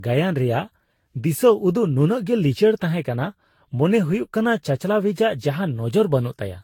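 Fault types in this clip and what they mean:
generation loss: speech is swirly, smeared and hollow with blurred attacks, likely from about seven repeated lossy encodes, consistent with Vorbis; nothing above 19.1 kHz.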